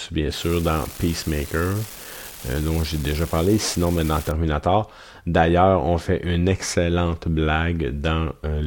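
From 0.33 s to 4.31 s an unreliable data bit adds a steady crackling fizz, even through pauses. One marginal data line flips its bit in random samples, so each error is an identical spike: equal-height needles in the waveform, broadband speckle across the spectrogram.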